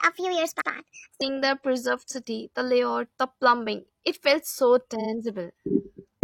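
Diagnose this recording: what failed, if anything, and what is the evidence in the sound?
The opening of this speech runs too fast, from 0.00 to 1.21 s, ending just before "the preserved city the". It plays at 1.33 times speed, and the pitch rises by about five semitones. Speed and pitch shift together, so the samples were read at the wrong rate. That points to the playback or editing stage. The likely cause is a clock or sample-rate mismatch applied to that section.

Repeated frames cause two stutters, a codec or storage fault. At 0.58 to 0.66 s, inside the fast section, two frames totalling 85.3 ms play once more. At 4.97 to 5.07 s, just after "felt so", a single 42.7 ms frame plays two extra times. Each repeat adds 85.3 ms. This fits 42.7 ms frames, like 2048 samples at 48 kHz.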